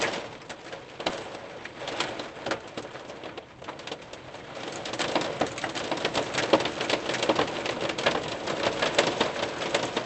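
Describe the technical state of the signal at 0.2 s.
At 0.2 s the sound is intact, with nothing beyond the ordinary coding character of the call path, whose bandwidth tops out around 8 kHz.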